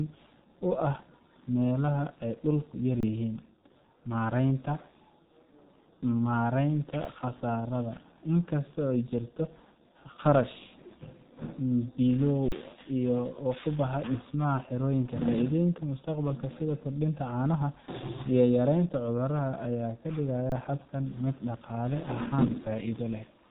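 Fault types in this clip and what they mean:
G.723.1 codec: A low-rate telephony codec that codes speech in 30 ms frames and tracks the voice's spectral shape only coarsely. Throughout this speech clip nothing reaches above 3.8 kHz, so the sound is muffled and narrow. The heavy coding damage adds a hoarse, rough texture and smears consonants into one another. The degree of damage points to an operating rate near 6.3 kbit/s.
Underrun with held sample: The playback buffer ran dry and the converter froze at its last output value until data arrived again. The waveform flattens at a non-zero level, so the sound stops abruptly rather than fading. This happens at 3.00, 7.04, 12.48 and 20.50 s, with flat stretches of about 26, 6, 37 and 25 ms. Audio was dropped during each stall, so playback jumps ahead at the end of every one.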